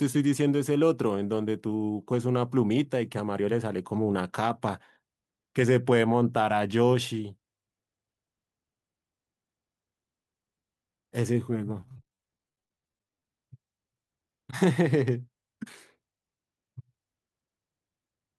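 Speech with repeated packet loss (robotic sound) from 11.81 to 13.25 s: dozens of gaps up to 30 ms, each filled by extending preceding sound, giving choppy speech.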